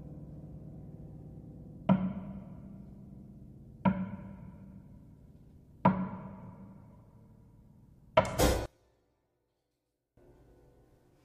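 From 8.66 to 10.17 s the sound collapses to a faint remnant about 28 dB down, likely from one channel inverted, so content common to both channels cancels when summed to mono. Unlike a dropout, a faint difference signal remains instead of true silence.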